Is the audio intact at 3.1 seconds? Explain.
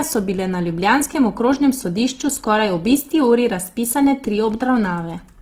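No. At 3.1 seconds the speech carries Opus compression damage, which runs through the whole clip, not just that moment. The sound is likely from Opus in its music (CELT) mode at a low rate, plausibly around 16 kbps. Starved of bits, the encoder keeps each band's energy but fills detail by folding lower bands or inserting noise, so the speech sounds rough and grainy. Bandwidth stays full, with content reaching about 20.3 kHz.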